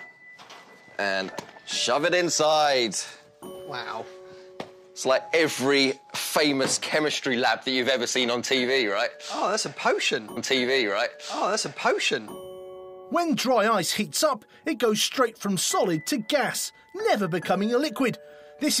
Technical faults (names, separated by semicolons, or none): stream segment repeated